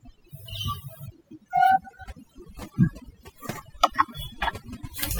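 Overdone noise removal runs throughout this speech clip: a noise reduction stage set too aggressively pulls individual frequency bands down or out whenever they sit near its noise estimate, taking quiet speech detail with them, so the background drops and breaks up into twinkling, warbling specks.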